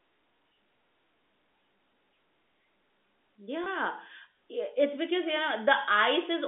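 Telephone-band speech, carried over G.711 coding and limited to about 250 Hz to 3.6 kHz, has one packet loss with pitch repetition from 3.64 to 3.66 s. About 20 ms of audio went missing, which fits a single lost packet. The receiver bridged the gap by repeating the last pitch period. The result is a brief held, buzzy moment before the speech resumes.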